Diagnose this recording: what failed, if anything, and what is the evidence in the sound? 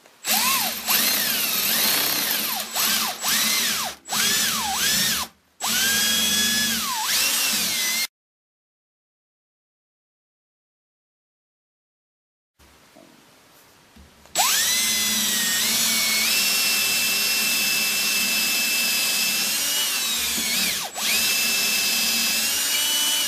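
Nothing failed in this recording, and the sound gives no evidence of any fault.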